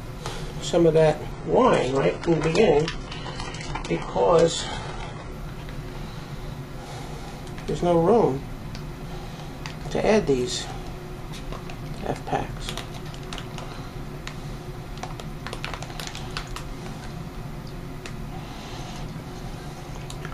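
From 1.32 to 5.32 s the adaptive stream plays at a lower bitrate. Quality drops abruptly, without a gap. Nothing remains above 11.1 kHz.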